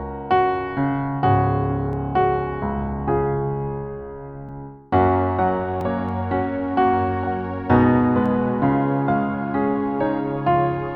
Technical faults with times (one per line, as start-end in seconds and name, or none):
1.93 dropped samples
4.49 block of digital silence
5.81 block of digital silence
6.09 dropped samples
8.26 dropped samples